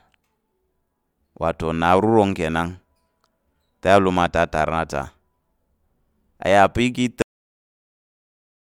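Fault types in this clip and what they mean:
Audio dropout to silence: at 7.22 s the speech cuts off mid-flow and the track stays silent through to the end, roughly 1.5 s later. The likely cause is a lost input, such as a disconnected device, a failed link or a mute, while the recorder kept writing silence. What separates this from an ordinary pause or a fade is that the room tone vanishes along with the speech, leaving a dead gap with nothing underneath.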